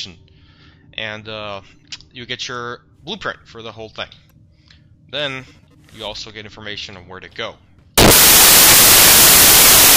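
At 7.98 s the audio collapses into loud, harsh broadband noise that continues to the end, a case of samples built from the wrong bytes. The reader is assembling each sample from misaligned or swapped bytes, so the rapidly fluctuating low-order bits land in the high-order position and dominate every value. On a waveform this appears as a dense block of large values; a spectrogram shows flat, broadband energy across all frequencies.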